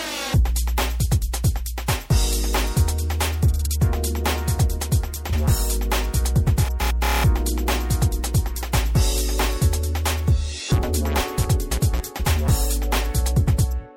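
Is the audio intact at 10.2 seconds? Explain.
Yes, at 10.2 seconds the audio is intact, with no audible dropout, click, distortion or other fault at that moment.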